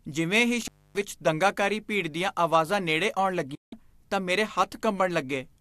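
At 0.61 to 1.02 s, an intermittent contact opens the line for about 0.27 s. Crackle at both edges gives away a physical connection rather than a digital mute.

At 3.55 to 3.73 s, a digital broadcast dropout fades out over 8 ms and mutes the speech for 168 ms. The gap is clean and crackle-free, which fits several lost frames.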